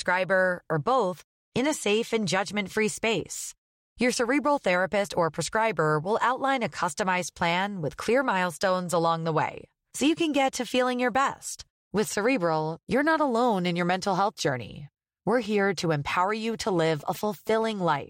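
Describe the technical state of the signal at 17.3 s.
At 17.3 s the speech picks up GSM signalling bursts, running from 16.21 to 17.96 s: a nearby 2G phone's short radio bursts are rectified by the audio circuit, producing a galloping dit-dit-dit of short 217 Hz buzzes, roughly 20 dB below the speech.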